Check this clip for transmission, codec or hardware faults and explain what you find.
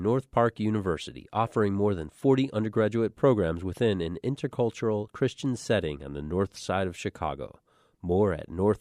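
Nothing here sounds wrong to me; the speech comes through steady and intact, with nothing to flag.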